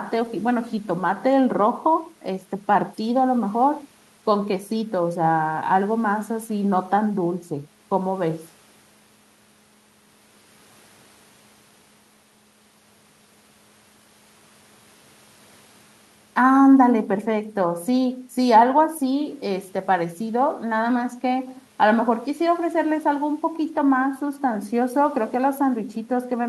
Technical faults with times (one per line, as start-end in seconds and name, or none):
none